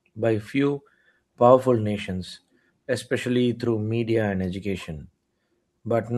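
No technical faults can be heard anywhere in this speech recording. Nothing in it calls for a timestamp or a repair.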